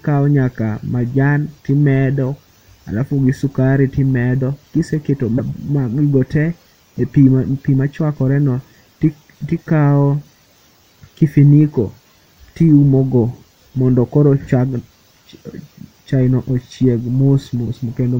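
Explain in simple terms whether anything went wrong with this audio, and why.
Broken MP3 bit reservoir at 5.37 to 5.40 s: a brief glitch and skip, likely because missing frames left the next one reading another frame's borrowed data.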